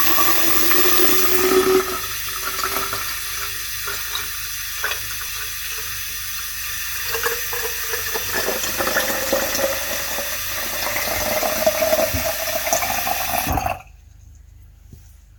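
At 5.29 s there is a tiny skip, the mark of an overlap between stream segments. Two consecutive chunks of the stream, which appear to be about 4 s long, were stamped with overlapping times, so the player discarded a few milliseconds of audio that was never actually duplicated. The waveform jumps straight across the missing sliver. Unlike a dropout, no silence or gap is heard, only an abrupt discontinuity in otherwise continuous sound.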